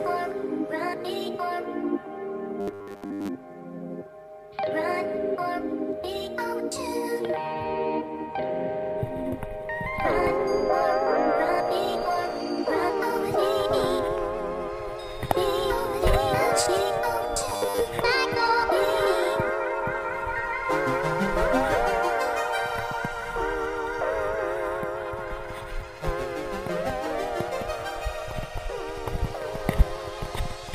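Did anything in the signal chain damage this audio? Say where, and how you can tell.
Yes. Robotic sound from repeated short buffers occurs at 2.61 to 3.29 s and again at 17.49 to 17.81 s. Both stretches carry a rigid, metallic buzz at 100 Hz. The stage is likely the driver or playback buffer. Fresh audio arrived too slowly, so the same 10 ms block was replayed. Most of the sound in each stretch was lost this way, and the looping set the 100 Hz buzz.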